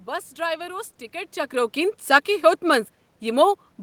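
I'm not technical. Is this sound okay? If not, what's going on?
Yes, the recording system is working properly here; the background noise is just the sound of the room, and the change in loudness around the one-second mark comes from the person shifting position relative to the microphone, not from the equipment.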